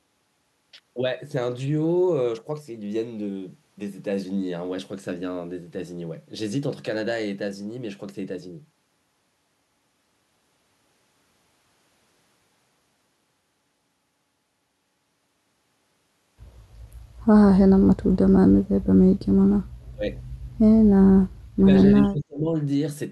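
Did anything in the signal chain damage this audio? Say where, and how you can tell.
Yes. In the last few seconds of the speech the level collapses three times: briefly at 19.94–20.04 s and 21.58–21.67 s, then for about half a second at 22.02–22.5 s, each dip falling by roughly 30 to 35 dB. This points to call processing, most likely speech suppressed in double talk, where the echo canceller mistook the talker for loudspeaker echo and ducked it. On a waveform the envelope pinches almost to nothing, and a spectrogram shows the harmonics going dark during each gap.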